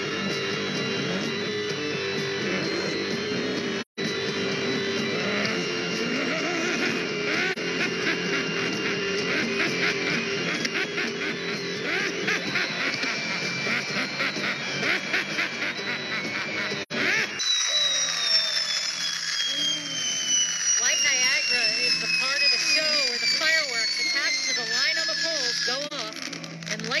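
AAC frame loss with muting: the decoder lost frames and zeroed their spectrum, so the overlapping transform windows fade the sound down and back up around each gap. The longest hole, 3.81 to 4.00 s, lasts about 170 ms, which fits four lost frames. Shorter soft-edged dropouts follow at 7.52 to 7.58 s (about 43 ms, one frame), 16.82 to 16.92 s (about 85 ms) and 25.87 to 25.93 s (about 43 ms).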